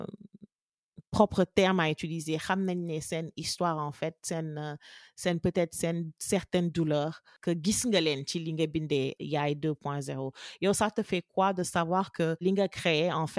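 Listening to this speech recording, nothing stood out as a technical problem.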